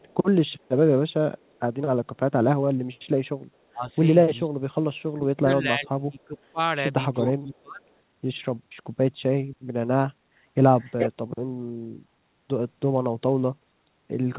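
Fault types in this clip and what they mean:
Echo leak: a faint copy of the speech trailing it by 431 ms, in brief scraps near the start and much louder at 10.8 to 11.1 s, likely loudspeaker pickup the echo canceller missed; spectrograms show the same harmonic pattern repeated, shifted later.
Speech suppressed in double talk: the speech level sinks by roughly 20 to 30 dB in pieces between 3.73 and 7.85 s, longest about one and a half seconds, likely from overlapping talk; waveforms show abrupt envelope dips, spectrograms faded bands.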